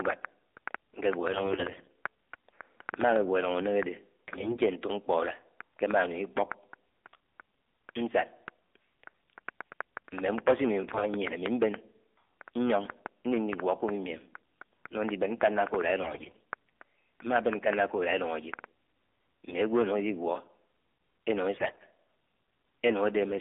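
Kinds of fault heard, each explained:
AMR narrowband mobile codec: The speech sounds buzzy, thin and synthetic, confined to roughly 250 Hz to 3.6 kHz, with plainly audible coding damage. That fits AMR-NB at a low rate near 7.4 kbps, rebuilding the voice from a vocal-tract model and sparse pulses.
AMR bit errors: Brief hoarse, scratchy, gargly stretches appear at 1.30–1.93, 4.28–4.62, 10.88–11.10, 16.02–16.42 and 21.56–21.85 s, keeping pitch and level. Flipped low-priority bits misplace the excitation pulses and skew fine gain and spectrum values, worst near 16 s.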